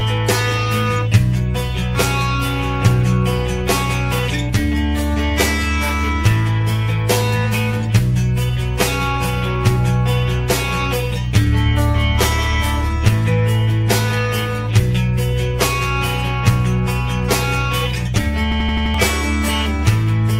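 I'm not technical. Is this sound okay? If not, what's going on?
No. There are two problems.

Channel delay (comb filtering), throughout: one side of the recording arrives about 10 ms later than the other, and when the two are combined they partly cancel each other at a series of evenly spaced pitches, starting around 50 Hz. Those fixed gaps in the tone make the whole clip sound hollow and slightly phasey, like it's coming down a tube.

System hang loop, from 18.52 to 18.94 s: the computer briefly froze while the sound hardware kept replaying the last scrap of audio it held. An 85 ms snippet repeats five times, about 11.7 times a second, which fits a 4096-sample buffer. It sounds like a rapid machine-gun stutter, and about 0.4 s of the real sound is lost behind it.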